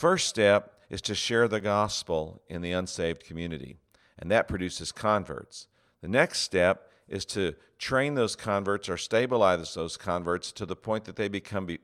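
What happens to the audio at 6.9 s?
Nothing goes wrong at 6.9 s; the speech runs through that moment intact, with no dropout, click or other fault.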